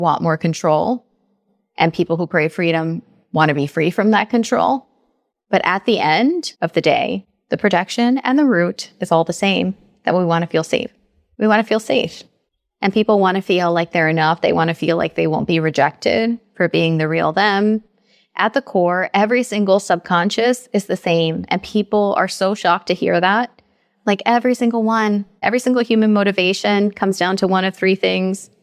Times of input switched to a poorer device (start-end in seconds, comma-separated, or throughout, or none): none